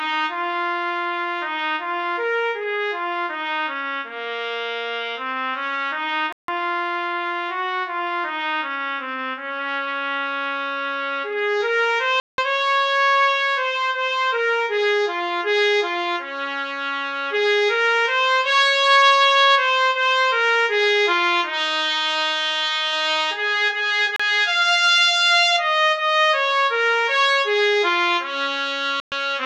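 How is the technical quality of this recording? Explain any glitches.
The recording has four brief dropouts to silence. They fall at 6.33 to 6.48 s (157 ms), 12.20 to 12.38 s (181 ms), 24.16 to 24.20 s (33 ms), and 29.00 to 29.12 s (118 ms). Each gap cuts abruptly, then the sound resumes. These are likely Bluetooth stalls. Interference delayed packets, the receiver's buffer ran empty, and playback halted until the resent data arrived.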